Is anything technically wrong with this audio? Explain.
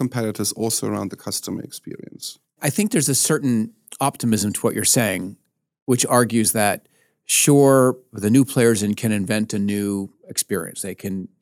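Yes. At 4.32 s, between "think there's a certain" and "to what you're saying", the microphone volume stepped up: software raised input gain about 4 dB at once, lifting voice and background together, unlike a louder talker.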